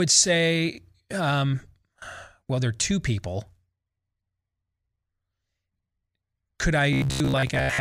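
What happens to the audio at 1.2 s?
Nothing goes wrong at 1.2 s; the speech carries on intact through that moment with no audible fault.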